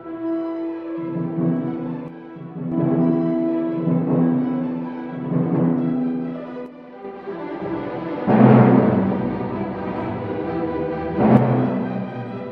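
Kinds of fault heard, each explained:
One channel drops out: Three times the level falls abruptly by about 6 dB: from 2.08 to 2.72 s, from 6.66 to 7.05 s, and from 11.37 s through to the end. A clean 6 dB step is what you get when a stereo pair is summed to mono and one side goes silent, so the likely cause is a lost left or right channel during those stretches.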